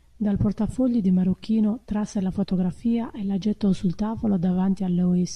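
A short speech recording with no technical fault to point to anywhere in it. Nothing in the signal chain gives a problem that can be placed at a time or traced to a cause.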